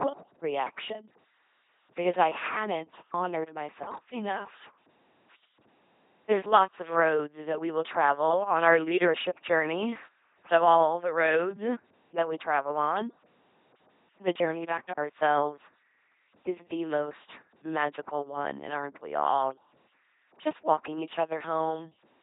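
From start to finish the speech carries LPC-10 vocoder damage, heavy throughout. The sound points to a 2.4 kbit/s stream. Each frame is resynthesised as pure buzz or pure hiss through a short all-pole filter, giving a mechanical, robotic tone with nothing above about 3.8 kHz.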